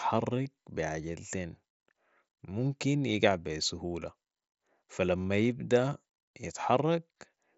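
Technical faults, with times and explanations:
0.45 s, concealed Bluetooth headset packet loss: just before "بي عجلتين", a single 7.5 ms stretch, which fits one lost frame on the headset link, was filled by repeating the best-matching piece of the preceding waveform. Because the gap is patched with continuing audio rather than left empty, there is no silent hole or hard click as with a plain dropout, only a barely perceptible smear before the real audio, carried over wideband mSBC, resumes.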